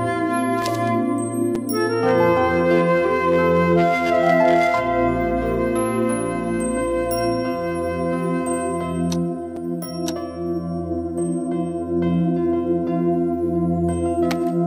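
Sharp ticks land at 0.62 s, 1.55 s and 9.56 s, each a tiny hole of about 1.45 ms, 5.8 ms and 5.1 ms. Each is a block of digital silence: samples replaced by zeros, most likely from an unfilled output buffer, consistent with 64- and 256-sample blocks, with abrupt edges.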